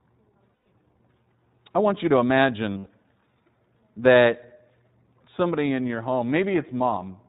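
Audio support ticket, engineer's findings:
iLBC codec, throughout. Band capped at 4 kHz. Rough, slightly synthetic speech, plainly audible damage. Each frame's excitation coded independently at low rate, consistent with the 15.2 kbps, 20 ms frame mode. Probable component: VoIP encoder path.

Lost iLBC frames at 0.54–0.66 s, 2.78–2.88 s, and 5.88 s just after "somebody in". Held buzzy, breathy vowel filling each gap. Decoder repeats the last pitch cycle mixed with noise, which fits about six, four and one lost 20 ms frames. Clean recovery immediately afterwards. Probable component: network packet loss.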